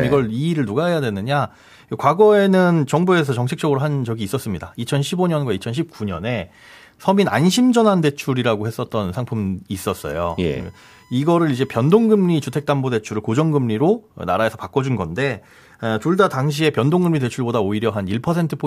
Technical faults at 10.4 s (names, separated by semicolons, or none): USB whine